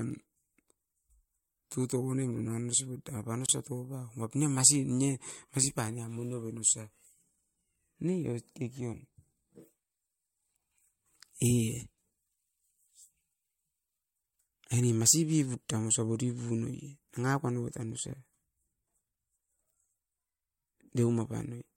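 At 3.46 to 3.49 s the speech breaks for about 27 ms, a gap at a join of encoded pieces. Two separately encoded segments were butted together with the encoder delay and final-frame padding left in. Unlike a dropout, nothing is lost: the speech resumes exactly where it stopped, and the silence's edges are smeared.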